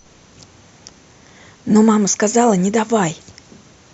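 No technical fault can be heard in the speech at any point; the signal remains continuous and intact throughout.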